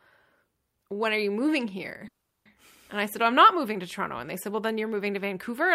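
A speech clip where, just after "when are you moving", the sound stalls from 2.07 to 2.47 s: the last sound trails off as a brief fading buzz or hiss, then about 0.36 s of silence, before speech resumes where it stopped with nothing missing. This is a call audio freeze, likely caused by delayed packets emptying the jitter buffer, which inserted a 0.38 s gap and pushed everything after it later.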